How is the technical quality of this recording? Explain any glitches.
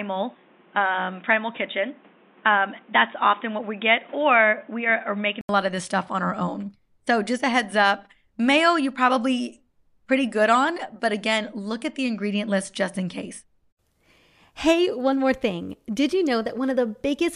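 The opening 5.49 seconds are band-limited, most likely because the input was on a poorer device (a different microphone or a headset call profile) before switching to the main one. Up to 5.49 s nothing above 3.8 kHz gets through, so the speech sounds dull and boxy, with background noise roughly 30 dB below the signal. At the switch there is an 80 ms silence, after which the sound opens up into full bandwidth at much the same level.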